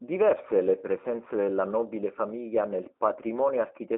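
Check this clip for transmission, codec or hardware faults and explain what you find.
One codec fault runs through the whole clip. Throughout, the speech sounds plainly rough and synthetic, confined to about 250 Hz to 3.7 kHz with nothing above 3.8 kHz. This is G.729 coding at a rate that fits 8 kbit/s, rebuilding speech from a vocal tract filter, pitch prediction and sparse pulses.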